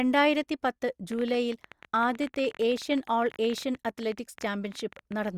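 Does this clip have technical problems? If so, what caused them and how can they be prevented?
Yes. A train of clicks runs from 1.12 s to 5.29 s: some seventy sharp pulses at an average of about 15.1 per second, spaced irregularly, peaking around 5 dB above the speech and audible in the pauses too. The likely cause is interference from nearby equipment or a faulty connection or power supply. On a waveform they show as narrow spikes; a spectrogram shows thin vertical broadband lines scattered unevenly across that stretch. Prevent it by moving the recording chain away from interfering gear and using a stable, properly powered interface.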